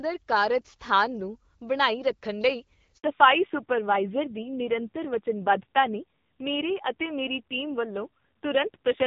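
At 2.98 s, right after "ਨੂੰ ਬਣਾਈ ਰੱਖਣ ਲਈ", a handover gap cuts the speech for 60 ms, to 3.04 s, as the call switches networks and no frames arrive. The voice drops out abruptly; the waveform shows a flat silent stretch and the spectrogram a full-height blank column.

From 3.04 s to the end, a fallback to narrowband follows. Before the switch, the wideband HD Voice sound is clear, with light coding texture. After it, everything above 4 kHz disappears, suggesting a move to a low-rate narrowband codec around 5.9 kbit/s. The voice turns duller and raspier, and the spectrogram's upper band goes empty.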